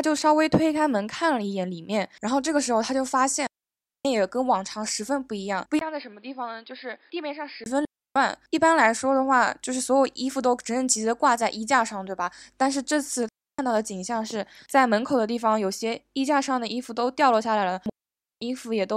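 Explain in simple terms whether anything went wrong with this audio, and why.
Four times the sound simply vanishes into near silence: 3.47 to 4.05 s, 7.85 to 8.16 s, 13.29 to 13.59 s and 17.90 to 18.42 s, each gap lasting about three tenths to a little over half a second. These are digital wireless dropouts. The radio link lost too much data, so the receiver muted cleanly. Unlike interference or a loose cable, there is no crackle or burst of noise around the gaps.

From 5.79 to 7.66 s the speech turns dull and boxy, with nothing above about 5 kHz. It also gets noticeably quieter and picks up a faint new background noise, and there is a tiny 20 ms gap where the change happens. This is most likely an input switched to a poorer device. A simple tone or volume change wouldn't add that fresh background noise.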